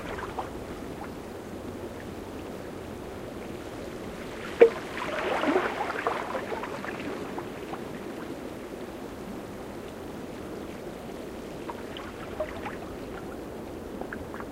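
No technical faults can be heard anywhere in these sounds. Nothing needs a timestamp or a note on what went wrong.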